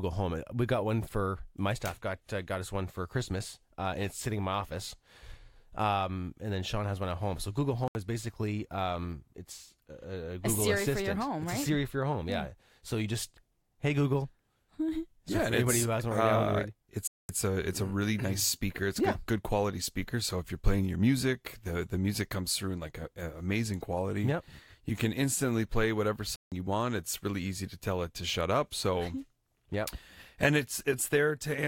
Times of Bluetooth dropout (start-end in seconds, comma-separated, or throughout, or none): 7.88-7.95, 17.07-17.29, 26.36-26.52